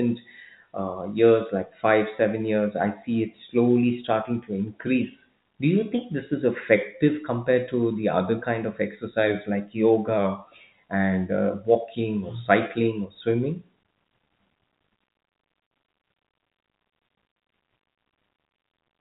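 No technical faults are audible.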